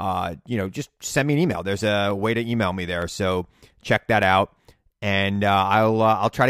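Sharp clicks at 1.18 s (after "you know just"), 2.11, 3.02, 4.23 and 5.36 s point to likely dropped samples: a fraction of a millisecond missing makes the waveform jump.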